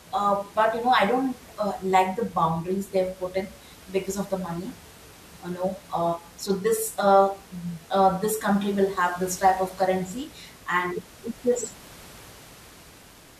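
Nothing in this speech recording stood out on listening, with only a low room noise sitting about 24 dB beneath the speech.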